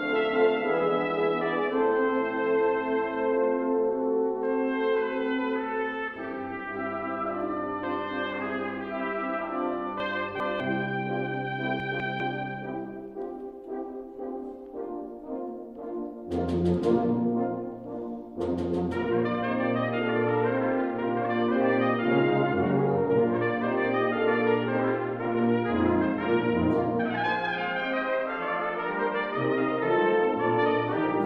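Chunks out of order at 10.0–10.6 s and 11.8–12.2 s: 200 ms blocks play late, by two then one, jumbling the sound.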